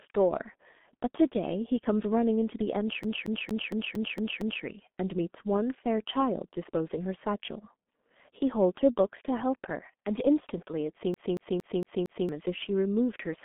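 From the start and through the whole clip, the speech carries heavy G.723.1 codec damage. The sound is muffled and hoarse, with smeared consonants, which fits a low-rate setting of around 6 kbit/s that coarsely models the voice in long frames. The band runs from about 200 Hz to 3.5 kHz. On a spectrogram the energy stops sharply, with nothing above 3.8 kHz, and harmonics look blurred and blocky across frame boundaries.

From 3.03 to 4.64 s the playback sticks like a CD stuck on one turn. A scratch makes the player jump back to the same spot each revolution, so one 0.23 s slice repeats seven times in a fast, even stutter, with a brief mute at each jump. The waveform shows identical blocks side by side, separated by tiny gaps. The same fault returns from 11.14 to 12.29 s with a 0.23 s slice, repeating five times.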